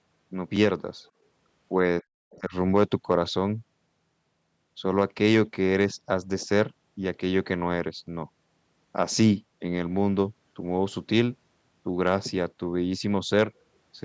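At 0.56 s there's a tiny click: a repeated buffer, where the device replayed its last 4 ms block once because fresh audio was late, which fits a 64-sample buffer. From 1.05 to 1.10 s a faint second voice, about 40 dB under the speech, slips in, likely the other side's voice leaking through past the echo canceller. Between 2.00 and 2.53 s the speech dips hard, down by something like 40 dB over roughly 300 ms in total. That's likely speech suppressed in double talk, with the canceller ducking everything while both sides talked. Inside that window, at 2.30 to 2.35 s, the leaking far-end voice comes back at about 35 dB down. The same 4 ms repeated-buffer click turns up again at 5.19 s and 8.07 s.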